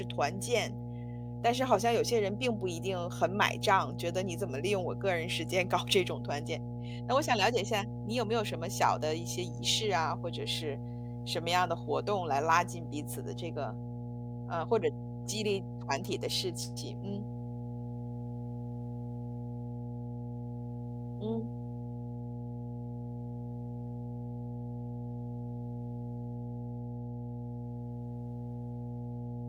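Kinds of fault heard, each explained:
Mains hum: power-line pickup, likely from a ground loop, leaves a steady 60 Hz drone under the speech the whole way through, only about 10 dB down.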